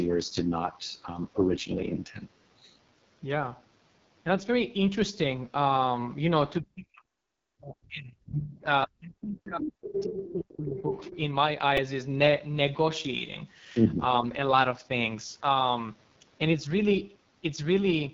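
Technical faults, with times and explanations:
Throughout, AMR wideband (HD Voice) codec: The audio sounds rough and raspy, and the damage is heavy. Everything comes through a low-rate wideband speech coder running at 6.6 kbit/s, its lowest mode. At that rate the pulse-driven vocal tract model can't track the speech finely, so the texture turns gritty and buzzy. The top band is filled with shaped noise rather than real detail, which adds a hissy, artificial edge.
6.59–8.65, 8.87–10.93 and 11.11–11.16, speech suppressed in double talk: The speech drops sharply for about 2 s in each of the first two stretches, at worst by roughly 40 dB, and sections fade or vanish. The last one is a brief 50 ms dip of about 10 dB. This is likely an echo canceller getting confused while both ends talk at once and clamping down on everything, including the talker we actually want to hear.
8.82–8.87, 9.87–10.03, 10.19–10.33 and 10.78–11.11, other side's voice leaking through: Short scraps of a second voice poke through. 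They sit about 15 dB below the main speech in the first and last bits, around 10 dB down at 10.19, and only about 5 dB down at 9.87. The likely cause is the far end playing on a loudspeaker and the echo canceller not scrubbing it all from the mic.
11.77, repeated buffer: There's a tiny click-buzz here. A very short slice of audio, under 3 ms, plays back several times in a row with hard joins. That pattern fits a 128-sample buffer being replayed four extra times because fresh audio didn't arrive in time. With a buffer that small the repeats are too fast to hear as a stutter, so it registers as a brief buzzy tick instead.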